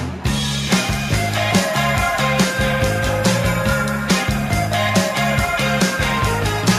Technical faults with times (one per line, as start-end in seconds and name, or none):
none